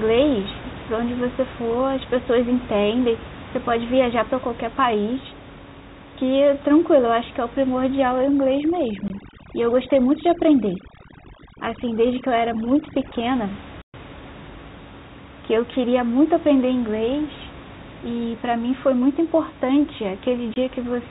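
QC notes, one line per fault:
8.18–13.26 s, overdone noise removal: bands near the noise estimate are pulled far down, so the room noise drops and breaks up into twinkling specks.
9.08–9.10 s and 20.54–20.56 s, packet loss filled with silence: each 20 ms hole, fitting one lost packet, is replaced by silence, leaving hard-edged gaps.
13.82–13.94 s, playback stall: the sound stops mid-flow for 120 ms, then resumes, likely because the player ran out of data or its thread was blocked.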